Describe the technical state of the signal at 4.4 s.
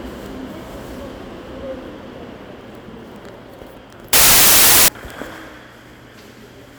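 At 4.4 s you're in a stretch of samples built from the wrong bytes, 4.13 to 4.88 s: misassembled bytes turn low bits into loud, harsh broadband noise.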